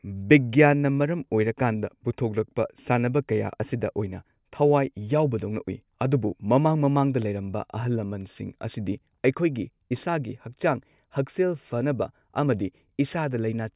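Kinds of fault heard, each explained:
No faults can be heard.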